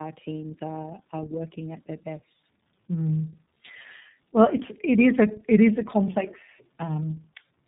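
Tandem speech coding runs from start to finish: the speech sounds as if it was squeezed through two low-rate speech codecs in a row, likely a G.729A leg and then an iLBC leg, the second re-coding the first's damage. It comes out rough, muffled and warbly, with nothing above 3.8 kHz.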